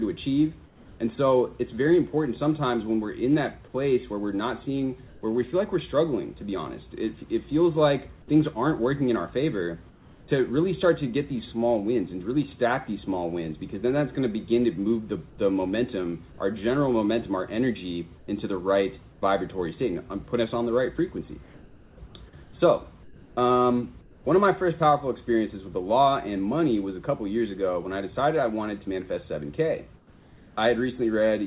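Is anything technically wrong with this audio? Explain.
Yes. There's comfort noise in place of the background in seven pauses: 0.66 to 1.0 s, 5.08 to 5.22 s, 9.9 to 10.28 s, 15.3 to 15.38 s, 18.18 to 19.58 s, 21.43 to 24.25 s, and 29.97 to 30.57 s. In each gap the real background goes flat and featureless, usually a touch quieter, about 1 to 5 dB down, before the sound resumes. The likely cause is discontinuous transmission: the sender stops sending during quiet stretches and the receiver plays synthetic noise shaped like the room. The audio is also capped at 4 kHz throughout, which fits a narrowband call codec along the lines of G.711 at 64 kbps.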